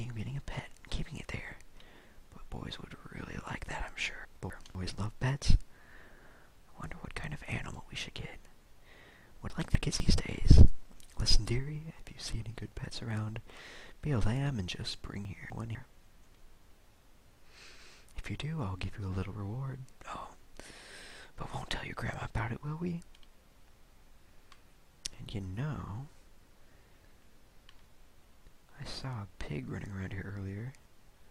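At 4.25–4.75 s, 9.5–10.0 s and 15.25–15.75 s, chunks out of order: a 250 ms chunk plays one chunk late, after its successor. Nothing is lost, but each swap creates three hard joins and a jumbled half-second.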